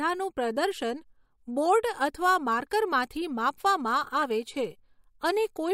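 At 4.22 s a corrupt frame was decoded: a couple of compressed frames reached the decoder with damaged bits, and it played them anyway instead of concealing them. Misread codes and gains placed energy at the wrong frequencies, for roughly the length of those frames. The result is a brief, sharp chirp-like blip cutting across the speech, peaking at around -30 dBFS.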